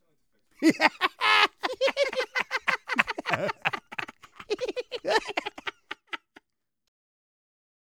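No technical faults can be heard in this recording.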